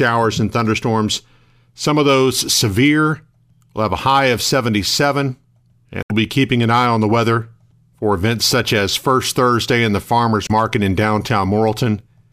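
Damaged data in a compressed stream hits the speech twice. Corrupted bytes reach the decoder, which misreads the affected frames and loses sync until it finds a valid frame header again. The result is a brief chirp or squawk in place of the speech, first from 6.00 to 6.11 s, about a tenth of a second, then a shorter blip from 10.46 to 10.51 s.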